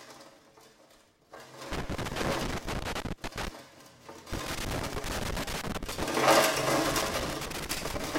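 Irregular bursts of crackle and scratching break into the sound three times: from 1.72 to 3.48 s, from 4.33 to 6.04 s, and from 6.86 to 8.06 s, each burst lasting between about one and two seconds. This is loose connector crackle. A worn or dirty contact in the signal path keeps making and losing connection as it shifts, chopping the audio into ragged fragments.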